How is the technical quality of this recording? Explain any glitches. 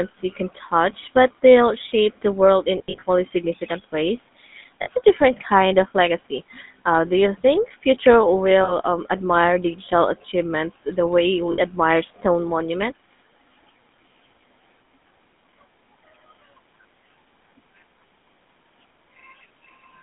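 The recording is poor, with codec damage throughout and four dropouts.

Throughout, the GSM full-rate codec, consistent with 13 kbps, rebuilds the speech from a vocal-tract model and coarse pulse excitation, narrowed to about 200 Hz to 3.6 kHz, leaving it buzzy and gravelly.

At 2.78 to 3.03 s, 4.82 s, 8.64 s and 11.52 s there are lost GSM frames. The decoder repeats the last good frame, so the sound briefly holds as a rough metallic ring. The first event is 140 ms of loss scattered over about 240 ms, in runs of up to about 40 ms, and the others last 40 to 60 ms.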